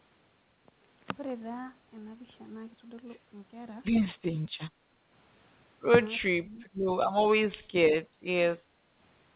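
Speech suppressed in double talk makes the speech dip at 6.39–6.59, 7.25–7.35, 7.56–7.84, 8.04–8.18, 8.63–8.67 and 8.88–9.0 s. The deepest drop is near 30 dB. On a spectrogram these show as faded, hollowed columns, likely from the echo canceller muting overlapping talk.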